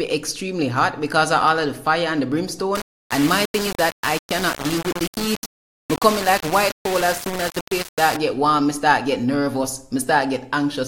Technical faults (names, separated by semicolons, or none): low bit depth without dither